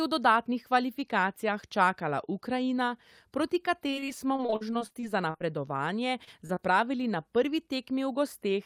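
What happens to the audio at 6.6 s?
Two short concealed packet losses sit right there, at 6.47–6.51 s and again at 6.55–6.58 s, just before "na prvi". In each, about 20 ms of the call arrived too late for the decoder, which patched the hole by extending the preceding sound and easing back into the real signal. The result is a quick double smear or wobble rather than silence or a sharp click, which sets it apart from a plain dropout.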